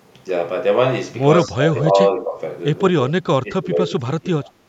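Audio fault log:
1.47 to 4.5 s, speech suppressed in double talk: The speech dips in three stretches, at 1.47 to 1.98 s, 2.16 to 2.38 s and 2.93 to 4.5 s. The first drops by around 20 dB. The second is milder, about 10 dB. The last is longest and deepest, about 25 dB, with roughly a second pulled down in pieces. The likely cause is an echo canceller hearing both sides at once. It cannot separate the talker from loudspeaker echo, so it turns both down.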